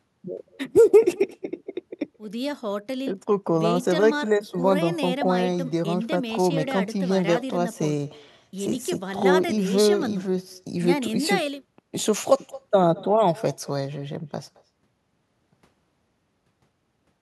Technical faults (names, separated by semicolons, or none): echo with no canceller